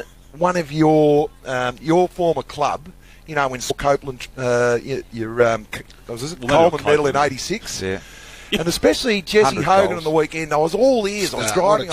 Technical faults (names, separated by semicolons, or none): stream segment skipped